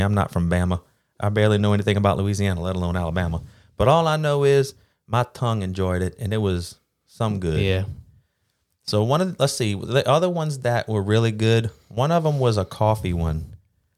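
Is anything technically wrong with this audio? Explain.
No, this speech recording has no technical faults. Nothing in it calls for correction.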